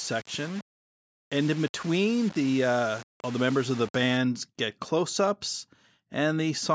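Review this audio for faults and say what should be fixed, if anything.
From 0.0 to 4.17 s, up to "get close ups", the speech carries grainy distortion that tracks its level: quiet passages turn gritty, with noise at roughly 20 dB below the signal. The likely cause is low bit depth without dither, fitting about 5-bit rounding. Keep a higher bit depth and apply dither whenever reducing word length.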